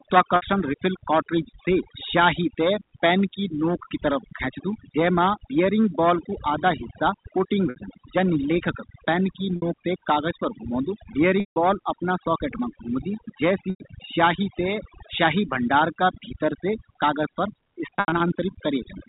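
Overdone noise removal runs through the whole clip. The suppressor cuts bands it mistakes for noise, taking quiet parts of the speech with them. The background drops to near-silence with twinkling specks. A spectrogram shows a black background dotted with isolated bright flecks.

Packet loss with pitch repetition comes next, at 0.36, 7.7 and 9.56 s, where 60 ms losses become a brief held, buzzy tone. The later losses last longer: 160 ms at 11.4 s and 100 ms at 13.7 s. These fade into silence before the speech cross-fades back. Near 17.97 s, losses are scattered over 240 ms, with the longest run 80 ms. A waveform shows identical repeating cycles decaying to flat. The telephone band limit at 4 kHz is audible throughout.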